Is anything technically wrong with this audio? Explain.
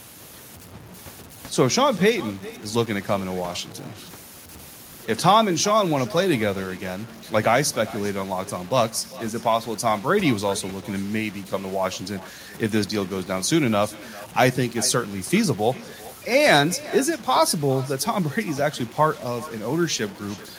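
Yes, two faults run through the whole of this speech recording.

Low bit depth without dither: the samples were likely cut down to very few bits, which fits about 7-bit audio, by simple truncation with no dither noise to smooth the steps. The rounding error therefore tracks the speech itself, sitting only around 25 dB below it. The result is a grainy, rasping distortion that rises and falls with the voice and is harshest on quiet syllables and decaying word endings.

Echo with no canceller: on the far end, the call is playing through a loudspeaker that the microphone picks up, and no echo canceller removes it before it returns. The talker's own voice comes back after a round trip of roughly 0.4 seconds, about 19 dB quieter than the direct speech. Every phrase is trailed by a faint, thin copy.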